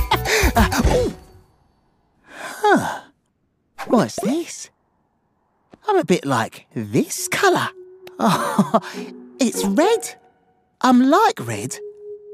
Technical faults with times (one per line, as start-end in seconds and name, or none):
none